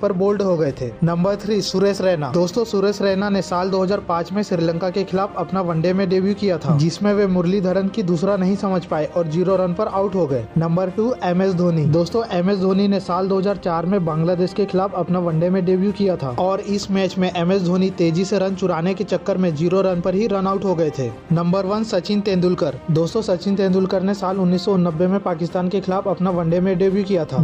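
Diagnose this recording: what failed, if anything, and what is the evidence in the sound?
Dropped samples at 26.51 s: a single sharp click, seen as a thin vertical line across the spectrum. A fraction of a millisecond of the stream is missing, so the waveform jumps straight to a later value. The likely stage is the driver or buffer, skipping samples during transfer.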